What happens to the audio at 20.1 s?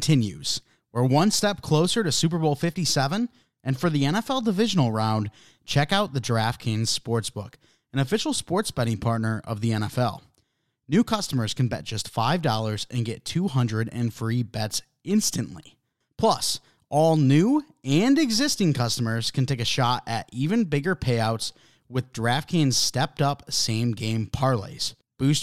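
Nothing goes wrong at 20.1 s; the speech carries straight through that moment with no audible dropout, glitch or other fault.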